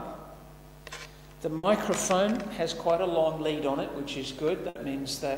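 A burst of packet loss occurs at 1.57 to 1.66 s and again at 4.69 to 4.78 s. Each time, a short run of audio data failed to arrive in time. The receiver concealed the hole by extending the last sound it had for about 60 ms while lowering its level, producing a brief smeared, fading tail. Playback then jumps ahead, and about 60 ms of the original audio never plays.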